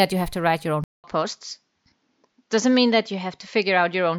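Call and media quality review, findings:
Speech drops out for 200 ms at 0.84 s, then returns duller to the end: nothing above 7.3 kHz, fresh noise floor roughly 55 dB down, level unchanged. Likely input switched to a poorer device with a narrower band.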